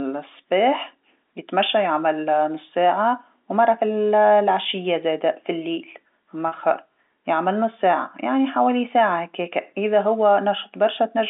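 Packet loss with pitch repetition occurs from 6.48 to 6.52 s. About 40 ms went missing, which fits two lost 20 ms packets, and the receiver bridged the gap by repeating the last pitch period, so the speech briefly sounds held and slightly buzzy.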